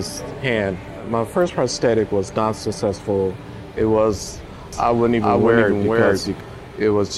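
From 4.73 s to 6.4 s a doubled audio track appears: a second, full-band copy of the sound runs roughly 400 ms behind, at about the same level, starting and stopping abruptly with no decay. The likely cause is a slower second capture path mixed in.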